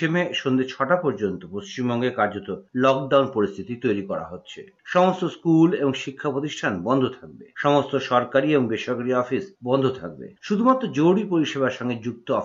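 No technical faults can be heard anywhere in this audio.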